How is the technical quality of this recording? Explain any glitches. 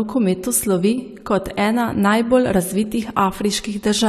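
There is one glitch, a brief level dip near the start. One channel drops out from 0.93 to 0.98 s, just before "kot ena najbolj". The speech suddenly falls by about 6 dB for 50 ms, likely because one stereo side vanished and the mono sum lost half its shared signal.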